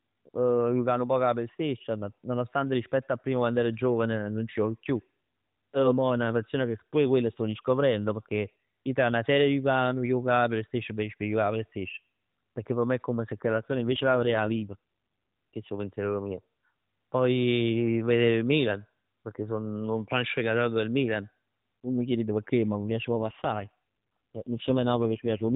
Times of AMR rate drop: 13.54-14.76, 23.12-25.56

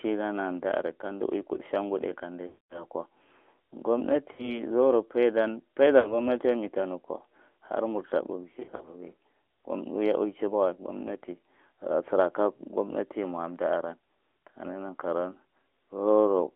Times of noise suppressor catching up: none

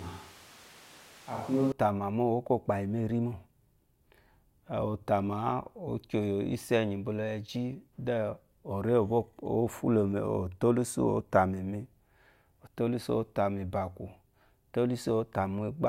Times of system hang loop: none

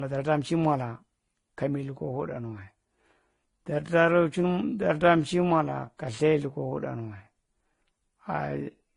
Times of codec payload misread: none

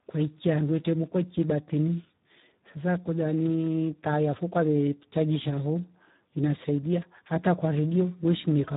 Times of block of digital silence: none

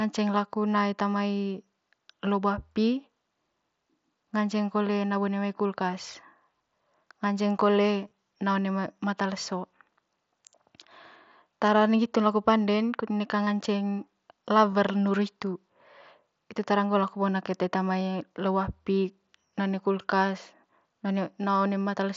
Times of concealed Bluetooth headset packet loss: 8.05-8.11, 13.45, 14.71

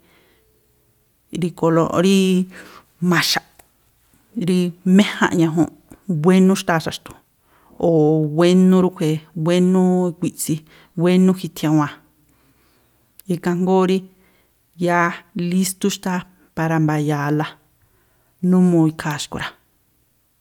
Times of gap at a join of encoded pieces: none

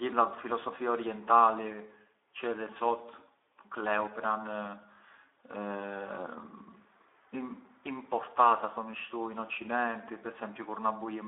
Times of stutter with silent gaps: none

